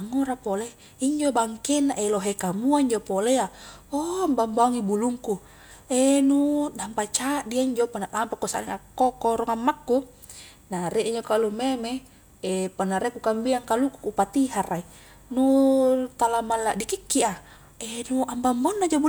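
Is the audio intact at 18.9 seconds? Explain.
Yes, at 18.9 seconds the speech plays through intact, with no dropout, click, distortion or other audible fault at that point.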